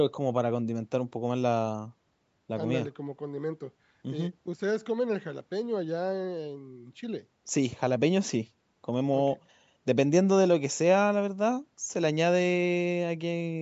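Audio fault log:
No audible faults found.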